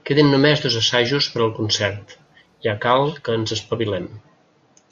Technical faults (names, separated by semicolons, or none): video or display buzz